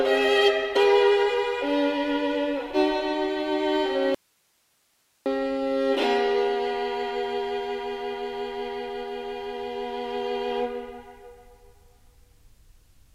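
An audio dropout to a faint residue runs from 4.15 to 5.26 s, likely a lost signal on a still-live path, leaving only hiss roughly 45 dB down, seen as an abrupt near-flat waveform gap.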